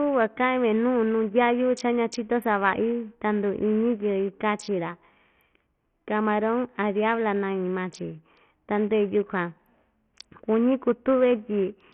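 From start to finish the speech sounds gritty and coarse, with treble that flickers in and out, a rough aliased edge on the sound and nothing at all above 14.3 kHz. This is likely heavy Bluetooth SBC compression, starving the upper sub-bands of bits at a rate that fits roughly 48 kbps.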